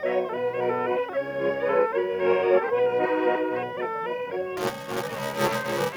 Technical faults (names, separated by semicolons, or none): buffer tearing